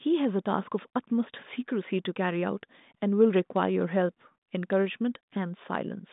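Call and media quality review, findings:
No faults found; speech is carried over G.726 ADPCM at 40 kbit/s within the 150 Hz to 3.7 kHz telephone band, with nothing above 3.8 kHz.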